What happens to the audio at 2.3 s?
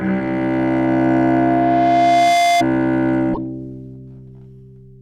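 At 2.3 s a loudspeaker feedback squeal is sounding, running from 0.58 to 2.64 s: a microphone-speaker loop self-oscillates at 693 Hz, swelling over about two seconds to sit about 5 dB above the sound.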